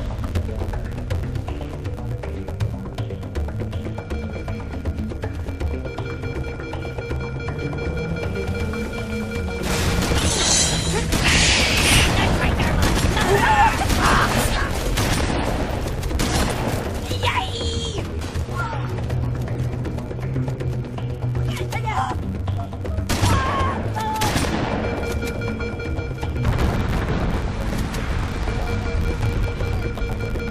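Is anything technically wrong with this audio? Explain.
Yes. Throughout the audio there is a filter restarted on every block. Some filter stage is discarding its internal state at each block boundary and processing every new block as if it followed silence, so each block opens with a small transient. These repeat at 86.1 Hz, which fits a 512-sample buffer. The result is a steady buzz at that rate, riding underneath the sound and growing louder or quieter with the signal level.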